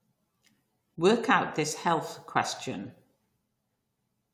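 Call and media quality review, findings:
No audible faults found in this speech clip.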